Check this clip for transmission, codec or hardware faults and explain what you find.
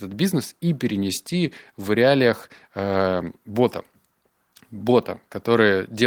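Nothing stood out on listening to this speech clip, and there is nothing here to trace to transmission, the codec or the hardware.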